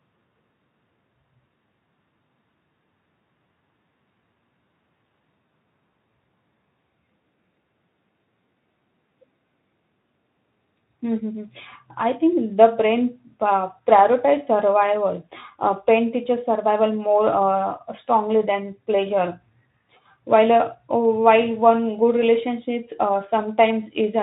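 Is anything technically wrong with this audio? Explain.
No, nothing is technically wrong: the speech comes through a Speex voice codec at 15 kbps with only light coding damage, and the signal shows no faults.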